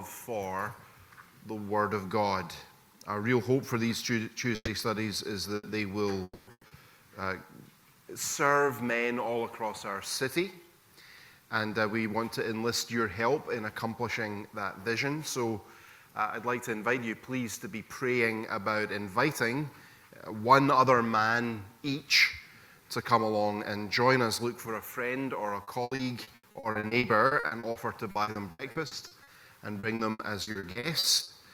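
At 4.55 to 4.70 s and again at 5.55 to 5.66 s, a burst of packet loss removes about 120 ms and then 80 ms of audio. The receiver stretches the last sound into a fading buzz or hiss before jumping ahead.

From 6.23 to 6.50 s, the sound continues as a fading tail for about 240 ms and ends in a brief silence, likely a long network dropout. Another burst follows at 6.51 to 6.66 s, concealing 120 ms. Then a short concealed packet loss at 6.67 to 6.74 s patches 40 ms with a quick smear.

Repeated packet loss (robotic sound) begins at 25.63 s and runs to 29.30 s, with 24 gaps of up to 80 ms each. It resumes from 29.79 to 31.30 s with 10 more gaps. Each gap is filled by continuing the previous sound, and about 29% of both stretches is patched this way, so the audio turns choppy with pieces missing.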